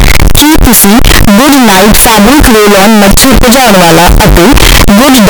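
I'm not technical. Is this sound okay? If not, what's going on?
No. The system likely mixed up signed and unsigned samples, turning the whole speech clip into loud, harsh distortion where even the quiet pauses blare.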